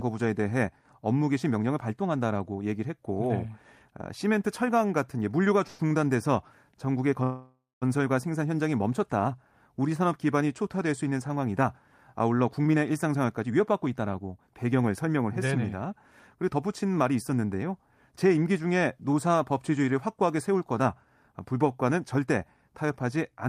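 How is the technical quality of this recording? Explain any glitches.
The recording has network delivery problems: two call audio freezes, one short stall from a late packet, and three stretches of jitter buffer speed-up.

Call audio freeze, at 5.67–5.81 s and 7.23–7.84 s: packets were likely held up in transit and the jitter buffer ran dry. The receiver extended the last sound as a fading buzz, about 0.11 s the first time, then resumed where it stopped. The second freeze lasted 0.58 s and fell into roughly 0.2 s of silence before the speech returned. Nothing is lost, but there is an audible gap.

Short stall from a late packet, at 5.87–5.92 s: one packet arrived late, so the receiver stretched the preceding sound by 32 ms before continuing. The result is a held, faintly buzzy moment.

Jitter buffer speed-up, at 12.59–15.93 s, 16.35–17.69 s and 18.12–19.93 s: the buffer had built up excess delay, so the receiver trimmed tiny pitch-period slices to catch up. 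The speech runs about 7–8% faster at unchanged pitch and sounds slightly hurried. Roughly 0.3 s, 0.1 s and 0.15 s were removed in the three stretches.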